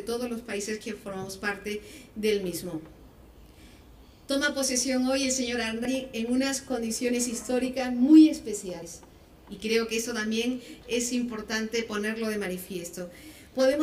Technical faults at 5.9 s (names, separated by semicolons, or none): dropped buffer (overrun)